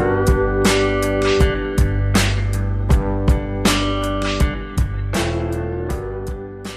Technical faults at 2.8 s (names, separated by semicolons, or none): none